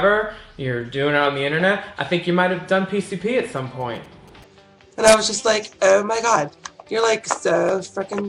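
A nearby 2G phone sending signalling bursts has its radio pulses rectified by the audio circuit, producing GSM signalling bursts from 3.57 to 4.44 s. They come through as a galloping dit-dit-dit of short 217 Hz buzzes, roughly 30 dB below the main sound.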